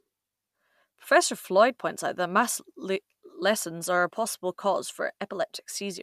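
Nothing in this bit of speech stands out as a technical fault, so there's nothing to point to anywhere along the way.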